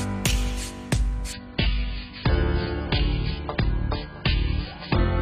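Adaptive stream at a lower bitrate, 1.33 s onward: the sound abruptly switches, gaplessly, to a much thinner encoded version with nothing above 5 kHz.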